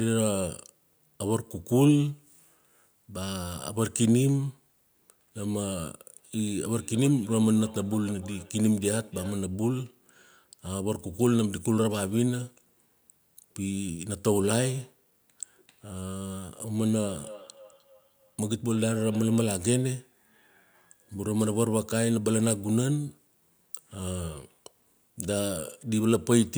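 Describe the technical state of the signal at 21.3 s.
At 21.3 s the speech signal is intact, with no technical fault audible at that point.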